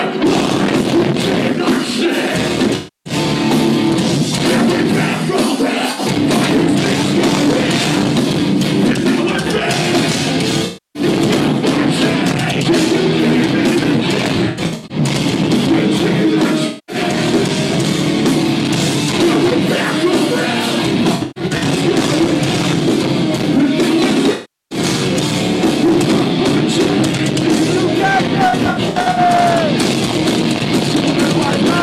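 AAC frame loss with concealment smears the audio at 2.76–3.13, 5.91–6.00, 10.65–11.03, 14.34–14.97, 16.67–16.96, 21.15–21.63, 24.33–24.79 and 28.49–29.18 s. Missing frames are patched from earlier spectrum, so gaps sound noisy and phasey rather than cutting to clean silence.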